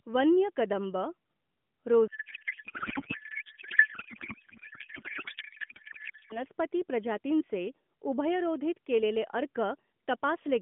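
From 2.08 to 6.44 s the speech turns into garbled noise and warble that barely tracks it: a codec payload misread, pointing to octet-aligned AMR frames decoded as bandwidth-efficient, over an otherwise narrow phone-band AMR line.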